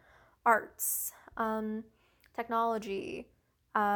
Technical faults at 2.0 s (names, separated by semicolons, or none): none